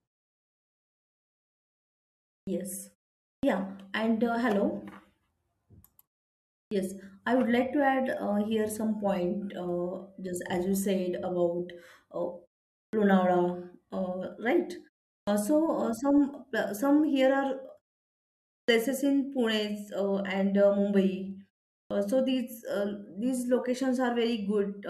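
At 2.42, 3.38, 6.67, 12.88, 15.23, 18.64 and 21.86 s there's a clipped start after a pause. The output drops into sleep during each gap and needs roughly 43 to 52 ms to wake, so the speech pops in abruptly, missing its onset, while the pauses themselves just go quiet.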